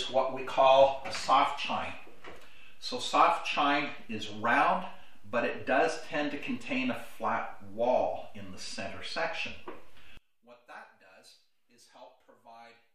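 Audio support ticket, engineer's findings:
10.17–12.95 s: sound collapses to a faint residue, about 26 dB down. Likely one channel inverted; reversed polarity cancels the shared centre content when summed to mono.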